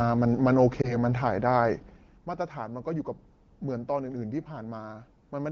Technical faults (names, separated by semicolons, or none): lost AMR speech frames